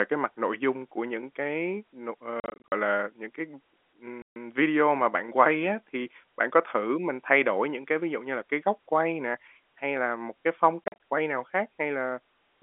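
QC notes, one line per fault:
2.4–2.72 s, 4.22–4.36 s and 10.84–10.96 s, packet loss filled with silence: dropouts cut holes in the speech, each with hard edges. The first starts after "của những cái n", with about 180 ms lost in runs of up to 40 ms, scattered over 320 ms. The second is a 140 ms gap before "video mà bạn quay". The third comes after "là một cái phong", with 100 ms missing in runs of up to 40 ms, spread over 160 ms. The hole lengths fit 20 ms packets, and the band-limited telephone sound of the G.711 coding continues around them.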